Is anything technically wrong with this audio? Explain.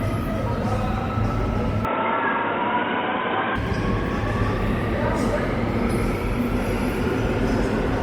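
Yes. From 1.85 s to 3.56 s the sound turns dull and boxy, with nothing above 3.8 kHz, and a new background hiss sits well below it, around 30 dB down. The change comes in at about the same level and with no gap at either edge. This is likely an input switched to a poorer device: the system briefly changed microphones, and the narrower-band replacement brought its own tone and noise until the original input returned.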